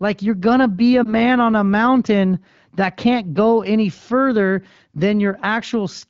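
Lost AMR speech frames occur between 1.04 and 1.14 s, right after "going to be a" and before "on a mountain that". One 20 ms frame failed its checksum, so the decoder filled the gap by repeating the last good pitch and vocal-tract settings at reduced gain. It sounds like a brief dip or warble. The surrounding speech is clear wideband audio, which fits the AMR-WB (HD Voice) codec at 12.65 kbit/s.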